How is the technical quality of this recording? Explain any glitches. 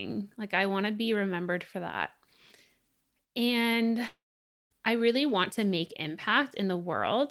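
There's one real glitch in this speech clip. From 4.07 to 4.73 s, the audio stretches into a fading buzz, goes silent for about half a second, then resumes with roughly 0.64 s missing, likely a long network dropout.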